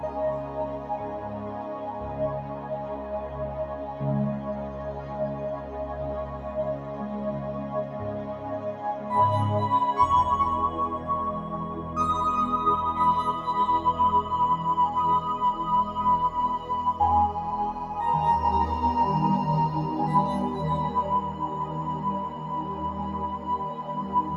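From start to finish, a noise suppressor applied to music or sounds is working against the material. Built for speech, it treats steady, sustained content, ambience and decay tails as noise and pulls them down by around 10 dB, letting onsets through. The result pumps and thins as tails sink after each attack. On a waveform, the envelope drops sharply after transients. A spectrogram shows sustained bands and reverb smears fading in patchy, flickering blocks.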